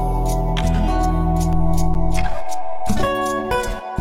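At 1.53 s a DC step shifts the waveform's zero line, heard as a low thump or click rather than a dropout, and the offset holds until stepping back at 3.04 s. At 1.94 s an 8 ms gap between stream segments inserts hard-edged silence. Unlike a dropout, nothing is lost; the following audio simply arrives later.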